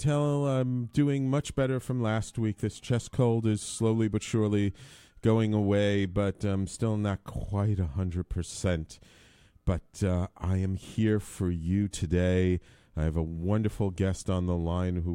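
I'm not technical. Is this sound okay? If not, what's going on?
Yes, this sound is okay, and nothing is going wrong in it.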